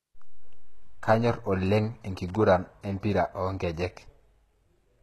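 Speech with plainly audible compression damage throughout: the treble sounds gritty and synthetic, with nothing above 12.3 kHz, likely HE-AAC compression at a bitrate around 16 kbps. On a spectrogram this shows as a hard ceiling and smeared, copied-looking upper bands. From 2.28 to 2.36 s, a loose connector crackle adds an irregular scratchy burst as a contact makes and breaks, appearing on the waveform as jagged, chopped spikes.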